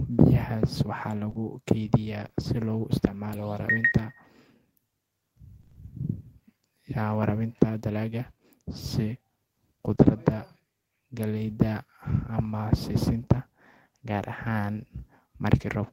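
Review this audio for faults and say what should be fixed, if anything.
Scattered short gaps, 1.25 to 3.35 s. Around five small holes, none longer than about 20 ms and roughly 100 ms in all, are spread across this two-second stretch. That is a small fraction of the span. Each was covered by extending the preceding sound and then blending back, with about 360 ms of audio touched by that smoothing. The result is brief ticks and momentary smears in otherwise continuous speech. A larger jitter buffer and a steadier network path would let late packets arrive in time.

Repeated packet loss (robotic sound), 5.61 to 5.77 s. Four gaps of up to 20 ms each land within 160 ms, so 80 ms, half the span, is synthetic continuation. The concealment never fully recovers before the next hole arrives. The speech turns choppy, with pieces of it missing. This burst pattern points to congestion or a flaky wireless link, so prioritising the audio traffic or fixing the link would prevent it.

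Short concealed packet loss, 9.95 to 9.99 s. About 20 ms of audio never reached the decoder in time. The gap was bridged by carrying the last sound forward and then crossfading into the real signal. It is heard as a brief wobble or smear at that point, and a short consonant could drop out. Allowing slightly more jitter-buffer headroom would give the late packet time to arrive.

Lost packet rebuilt from error correction, 9.99 to 10.09 s. Immediately after the concealed gap, about 60 ms was played from the lower-bitrate backup copies carried inside following packets. That fits three separate 20 ms frames. There is no audible hole, but these moments sound rougher and noisier. Reducing loss on the path, or raising the bitrate allotted to forward error correction, would make these stretches cleaner.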